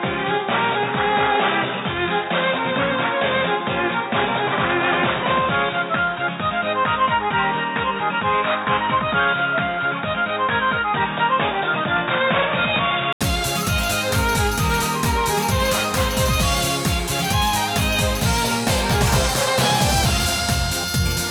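For the first 13.21 s the audio sounds dull and boxy, with nothing above 3.8 kHz and faint background noise sitting far below the signal. At 13.21 s there is a brief gap of about 80 ms, after which the sound opens up to full brightness with no change in loudness. The likely cause is an input switched to a poorer device: the recording began on a narrower-band microphone or headset call profile and then changed inputs.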